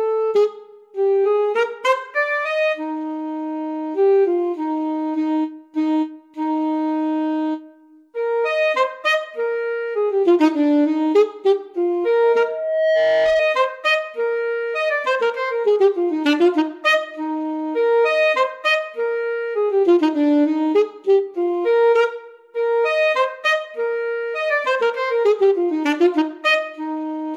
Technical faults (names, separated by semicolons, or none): loudspeaker feedback squeal